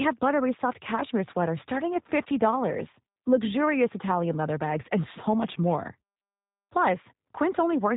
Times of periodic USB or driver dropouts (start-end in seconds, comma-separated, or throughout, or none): none